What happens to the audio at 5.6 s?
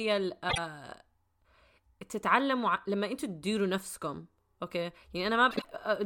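Two adjacent runs of frames reached the decoder in swapped order between 5.51 and 5.65 s, so it rebuilt that stretch with its halves exchanged. Each displaced block is about 52.2 ms, which fits two frames per run. This is frames out of order: the speech there comes out as a brief garbled flutter. Nothing is dropped, so the timing after it is unchanged.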